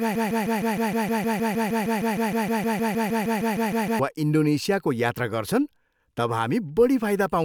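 From the opening until 4.0 s, a broken-record loop repeats one 155 ms fragment back to back, likely a stalled player resending its last buffer, so that stretch of speech is lost.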